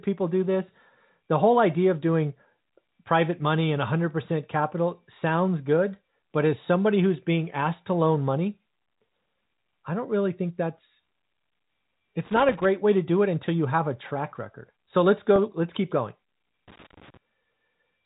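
Telephone speech in G.711 A-law format, so nothing above 4 kHz comes through. Loose connector crackle appears twice. The first burst runs from 12.26 to 12.65 s, just before "way to do it". The second runs from 16.68 to 17.17 s, right after "let's keep going". Each is an irregular, scratchy rattle lasting about 0.4 to 0.5 seconds. A worn or dirty contact is making and breaking as it shifts. That chops the signal on and off, and any DC on the line turns each break into a pop. There is also packet loss with pitch repetition from 15.36 to 15.38 s, just before "let's keep going". About 20 ms of audio went missing, which fits one lost packet. The receiver filled the hole by replaying the last pitch cycle. Because the gap is so short, it comes across as a brief, slightly buzzy hold rather than a dropout.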